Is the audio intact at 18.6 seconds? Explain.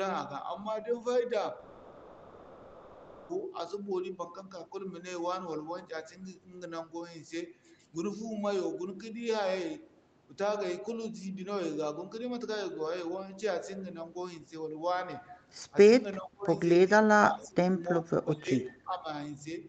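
No. From 18.63 to 19.07 s the speech dips by roughly 10 dB and thins out, partly fading for about 0.4 s in total. The likely cause is speech suppressed in double talk: the echo canceller mistook overlapping talk for loudspeaker echo and attenuated it.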